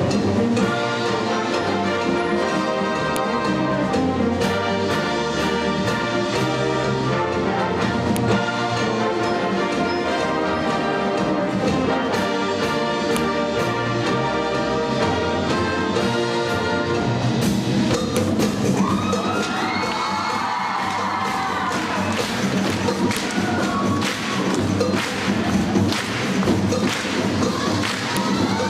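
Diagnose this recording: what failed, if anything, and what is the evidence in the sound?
What failed is the joining of the audio pieces, at the storage or streaming stage, and the result is a file header played as audio. There's a sharp, loud click at 3.16, 8.16, 13.17, 18.17, 23.17 and 28.17 s, exactly 5 s apart no matter what the sound is doing, each one a single instant. That spacing fits 5-second WAV pieces stuck together with their headers left in, so those few dozen header bytes get played as raw samples and snap at every join.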